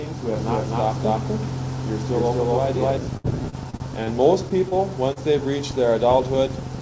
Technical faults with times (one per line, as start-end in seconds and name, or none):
0.35-2.97 doubled audio track
3.17-4.10 repeated packet loss (robotic sound)
4.68-4.74 short concealed packet loss
5.13-5.19 short concealed packet loss